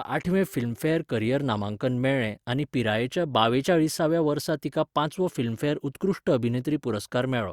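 No technical faults can be heard anywhere in the speech.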